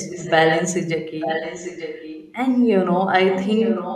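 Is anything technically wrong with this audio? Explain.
Yes. An echo leak runs through this speech clip in three stretches: 0.0 to 0.67 s, 1.2 to 2.35 s, and 3.29 s to the end. The far side is likely playing the call over a loudspeaker, with its echo canceller failing to strip what the microphone recaptured. A copy of the voice comes back 889 ms late, at about 5 dB below the speech in the first stretch and about 10 dB below in the other two.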